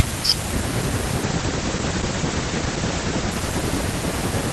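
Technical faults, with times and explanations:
1.25–4.39 s call bitrate drop: speech turns rough and muffled, with the top cut at 8 kHz and worst for 1.82 s, which fits the encoder falling from 32 to 12 kbps.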